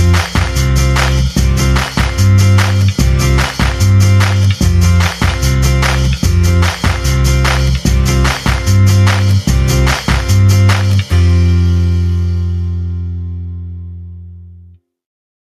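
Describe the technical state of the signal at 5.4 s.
At 5.4 s you're hearing gain pumping, which runs through the whole clip: the gain swings by around 5 dB, likely from a fast limiter fighting overdriven gain.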